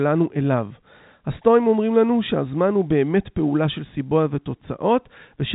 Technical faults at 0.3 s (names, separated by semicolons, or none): none